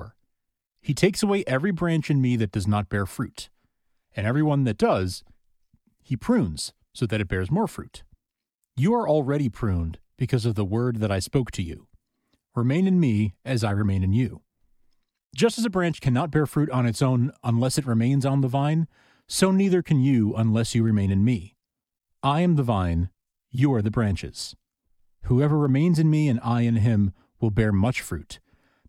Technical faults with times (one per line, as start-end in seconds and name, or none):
20.88 dropped samples
25.65 dropped samples